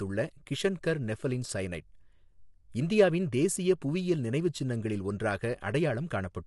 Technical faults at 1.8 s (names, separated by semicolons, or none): low-delay AAC compression